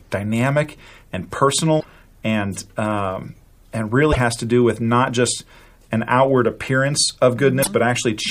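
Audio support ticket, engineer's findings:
Broken MP3 bit reservoir at 1.79 s (after "dynamic and"), 4.12 s (after "and um and") and 7.62 s (after "just an outward appearance"): roughly 60 ms glitches with skips, about two 26 ms frames each. Likely dropped frames; the next frames read borrowed reservoir bytes from other frames.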